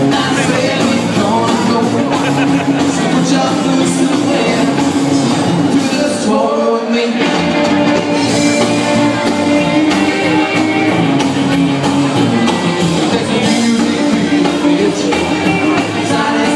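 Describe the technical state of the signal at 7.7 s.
At 7.7 s the signal is intact, with no audible fault at that moment.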